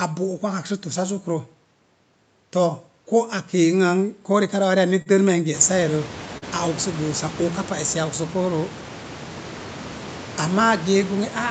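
At 5.02 to 5.08 s there is a short stall from a late packet. The jitter buffer ran dry, so the last sound was stretched for 40 ms and held slightly too long. At 6.38 to 6.44 s the same happens again, with 43 ms stretched. Nothing is lost either time, but each stall pushes playback later.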